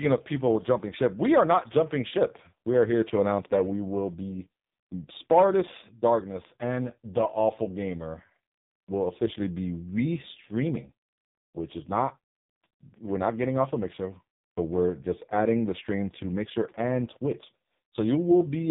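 From start to finish, the speech carries heavy AMR narrowband mobile codec damage. Nothing passes above 3.8 kHz. The voice sounds buzzy and synthetic, rebuilt from a coarse vocal-tract model with very few pulses per frame. That degree of damage points to AMR-NB's lowest modes, around 5 kbps.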